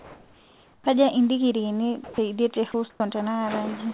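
From 0 to 0.86 s the background is replaced by steady, featureless comfort noise about 3 dB quieter, likely from discontinuous transmission. On a spectrogram it shows as a flat, uniform wash about 32 dB below the speech, with no detail.

At 0.82 to 0.86 s, the onset is clipped by the voice detector, likely because it triggered late. The first 40 ms is lost, so the waveform jumps abruptly from noise into speech with no gradual rise.

Sound is dropped by the voice detector at 2.04 to 2.18 s, 2.54 to 2.56 s, 2.72 to 2.74 s and 2.9 to 3.0 s, likely because quiet passages were taken for background. Speech briefly gives way to steady noise and leaves flat gaps in the waveform. Above all of this, the spectrogram is empty beyond 4 kHz, the ceiling of the call codec.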